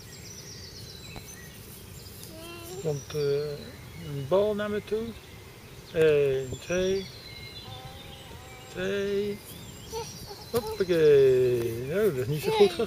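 A sudden voltage pulse, likely from a plug, switch or static discharge, enters the chain at 1.16 to 1.19 s, causing a single loud pop a few decibels above the ongoing sound.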